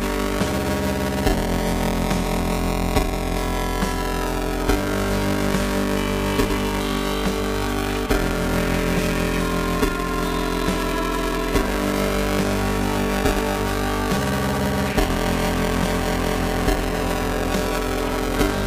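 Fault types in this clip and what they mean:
Buffer tearing: a steady robotic buzz at about 345 Hz runs through the whole clip wherever there is signal, which fits a 128-sample buffer. The writing and reading positions have crossed, so roughly two fifths of each period repeats audio from a few milliseconds earlier, hard-joined at both edges. Unlike an underrun, nothing drops to silence or stutters. The rattle is continuous, locked to the buffer rate, and disappears in gaps.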